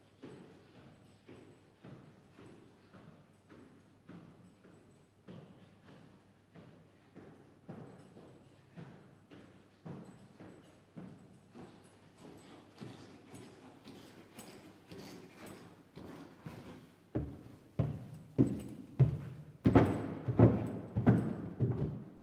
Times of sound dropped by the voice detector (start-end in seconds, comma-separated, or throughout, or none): 19.61-19.63, 22.17-22.23